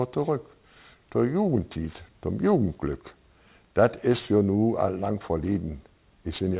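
Throughout, the sample rate was reduced without an anti-aliasing filter, which points to a drop to about 8 kHz. Content above the 4 kHz fold folds back as aliasing, faintly, some 25 dB down, lending sibilant and bright sounds a gritty, metallic edge.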